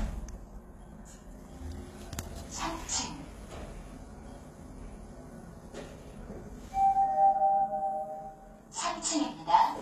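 A recording of sounds with plainly audible HE-AAC compression throughout. Nothing sits above 14.9 kHz. The treble reaches high but sounds gritty and metallic, likely rebuilt by spectral band replication from copied lower bands. This fits a bitrate around 20 kbps.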